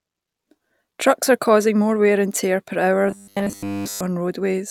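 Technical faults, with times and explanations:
3.08–4.01 s, robotic sound from repeated short buffers: right after "and tear per hour" the speech collapses into a rigid, metallic 100 Hz buzz for all of that stretch, likely from fresh audio arriving too late while a roughly 10 ms chunk gets looped in its place.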